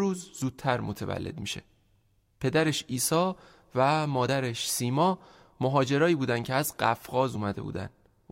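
At 0.42 s, 4.27 s and 7.34 s the speech is broken by damaged data in a compressed stream. Each event is very short, under 20 ms. Part of the encoded stream is wrong at those points. The decoder misreads the bad frames and loses sync. It then hunts for the next valid frame header. Each fault is heard as a sharp chirp or blip cutting into the speech.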